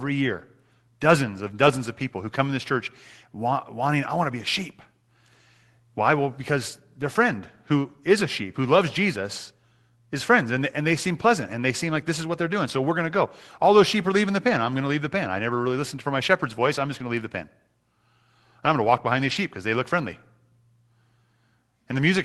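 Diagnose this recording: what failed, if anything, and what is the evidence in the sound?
Lost packets rebuilt from error correction, at the network stage, at 10.93–10.95 s, 14.49–14.51 s and 19.27–19.33 s. Each is a brief rough, noisier patch with no gap. The Opus decoder played the low-bitrate copies carried in the following packets, covering 20 ms, 20 ms and 40 ms.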